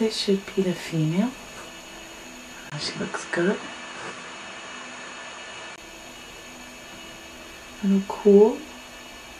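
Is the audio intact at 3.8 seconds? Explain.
No. From 2.70 s to 5.78 s the recording likely comes from an input switched to a poorer device, with the system changing to a lesser input partway through and back again. That device passes nothing above 10.5 kHz, so the sound goes duller at 3.8 seconds, with a faint new noise floor well below the signal. The level stays about the same, and a 20 ms gap of silence marks the change.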